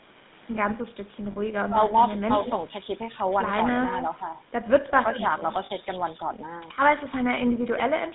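Throughout, the speech carries the buzzy, gravelly roughness of the GSM full-rate codec. The vocal tract is rebuilt from a coarse model and driven by a thinned, regularly spaced pulse excitation, which fits the 13 kbps full-rate coder. On a spectrogram the energy sits in a band from about 150 Hz to 3.7 kHz, with a hard ceiling and nothing above. The harmonics look smeared and grainy rather than cleanly striped.

At 1.32 s, and again at 5.66 s, there are lost GSM frames. Each gap is about 40 ms, which fits two missing 20 ms frames. The decoder repeats the last good frame's settings, so the sound freezes into a brief rough, metallic ring instead of moving on. In the waveform, a short stretch of repetitive texture replaces the natural envelope. On a spectrogram, the formant pattern stays flat and static for those few tens of milliseconds.

From 1.68 to 1.77 s and from 4.89 to 4.95 s, the speech dips by about 10 dB for roughly 100 ms and 70 ms. 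The likely cause is speech suppressed in double talk: the echo canceller could not separate near speech from far-end echo while both overlapped, and turned everything down. The waveform shows a sudden notch in the envelope, and the spectrogram thins out briefly.

At 2.39 to 2.52 s and 5.11 to 5.20 s, a faint delayed copy of the speech appears, about 10 dB below the main signal and trailing by 158 ms. This points to echo leak from a loudspeaker path that the canceller did not fully clear. It sounds like a delayed ghost behind the talker. On a spectrogram, a weaker duplicate of the formant traces is offset to the right by about 0.16 s. The microphone processing's bass roll-off is also visible at the bottom of the band.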